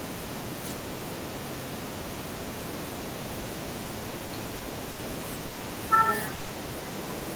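Speech, with repeated stalls (stutter) from 3.99 to 5.00 s: six brief gaps, longest 70 ms and 170 ms in total, each bridged by stretching the preceding sound, so the audio drags without losing anything. Two call audio freezes follow, at 5.46 s for 100 ms and at 6.34 s for 150 ms. Each is a single longer hold of the last sound as a fading buzz or hiss before the speech resumes intact, likely because packets were held up in transit, unlike the stutter's cluster of short hiccups.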